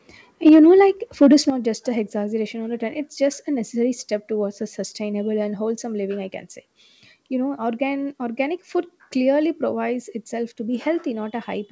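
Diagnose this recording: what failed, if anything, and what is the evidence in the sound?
At the converter stage, the microphone input was likely driven past full scale. The loudest speech peaks at 0.46–0.59 s (about 2 dB over) and 1.22–1.35 s (about 3 dB over) have flattened tops, giving those syllables a harsh, crackly microphone overload edge.

In call processing, the microphone volume stepped down twice. Speech and background drop suddenly by about 3 dB at 0.49 s, mid-peak, and by about 8 dB at 1.5 s, just before "just a exaggeration on", likely as the gain control responds to the overloaded peaks.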